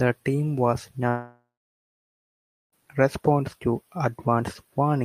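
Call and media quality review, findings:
Long network dropout, 1.08–2.73 s, after "team was", resumes at "response to". Likely packet loss on the network path. Concealment extends the last sound as a fading buzz, then about 1.27 s of silence. Roughly 1.64 s of speech lost.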